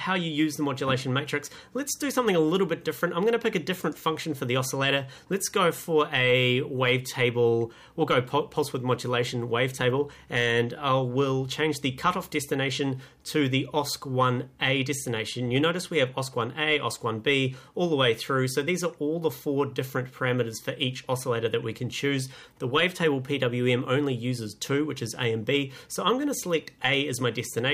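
Nothing in the audio points to a technical fault at any point, with no audible defect anywhere in the signal.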